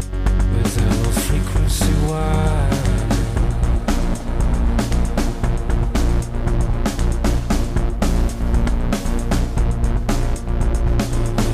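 No technical faults can be heard anywhere in the audio; the signal stays continuous and stable throughout.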